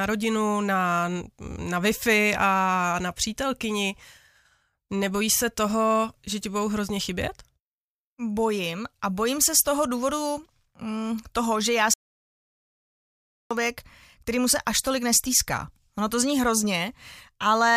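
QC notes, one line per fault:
11.94–13.51 s, audio dropout to silence: the speech cuts off mid-flow and about 1.57 s is lost to silence with no room tone, likely from a lost input or stray mute while recording continued. The waveform flatlines and the spectrogram shows a blank vertical band.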